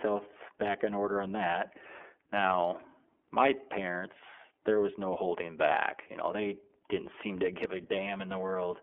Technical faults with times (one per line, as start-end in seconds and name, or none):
0.00-8.82 iLBC codec